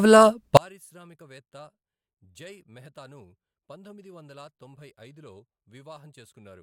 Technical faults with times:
0.57-6.62 one channel inverted

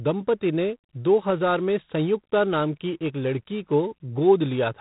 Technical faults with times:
0.00-4.81 G.726 ADPCM

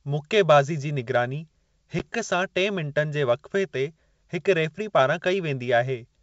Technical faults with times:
1.99-2.01 packet loss on an ADPCM call

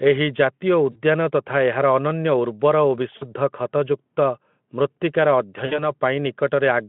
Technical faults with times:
0.91-1.00 VoIP packet loss concealed by the speech codec
3.17-3.25 VoIP packet loss concealed by the speech codec
5.65-5.84 VoIP packet loss concealed by the speech codec

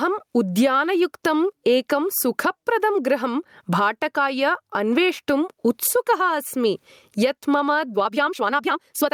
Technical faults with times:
0.00-9.13 gain pumping
7.92-9.13 time-stretched section

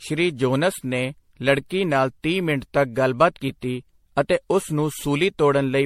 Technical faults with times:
0.00-5.86 generation loss

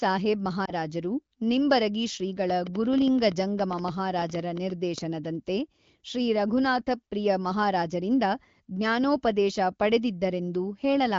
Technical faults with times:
0.65-0.73 lost AMR speech frames

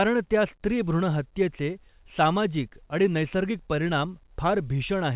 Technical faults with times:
none

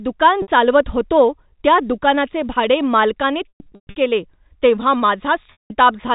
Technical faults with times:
0.42-0.48 packet loss with pitch repetition
3.49-3.96 packet loss with pitch repetition
5.52-5.70 packet loss with pitch repetition

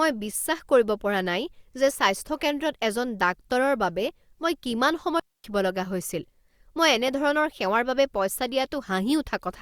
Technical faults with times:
5.20-5.44 digital wireless dropout

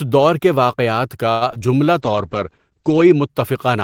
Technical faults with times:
1.31-1.62 repeated packet loss (robotic sound)
1.66-1.86 jitter buffer slow-down
1.98-3.36 call bitrate drop

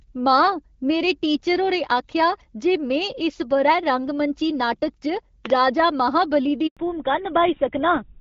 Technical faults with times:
5.46-5.52 loud pop
6.67-6.77 handover gap
6.77-8.20 fallback to narrowband

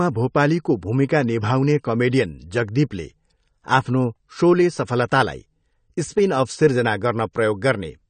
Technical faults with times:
0.00-8.09 AAC compression
7.33 pre-echo

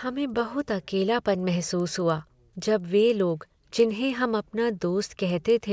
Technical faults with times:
0.00-5.72 resampler restarted on every block

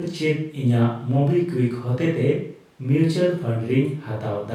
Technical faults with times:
none

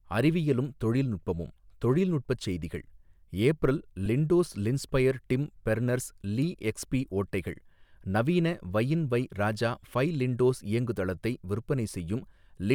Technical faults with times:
4.05-4.08 lost LE Audio frames

